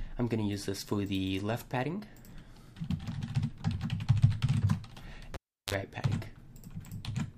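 At 5.34 s the cable is pulled and plugged in. A sharp pop marks the break. For about 350 ms the sound drops to near silence, because the signal path is open. Then the plug goes back in. For about 43 ms only the tip makes contact, so the unscreened conductor picks up 50 Hz mains hum. That gives a short, harsh buzz. A second pop follows as full contact returns, and the sound is back by 5.74 s.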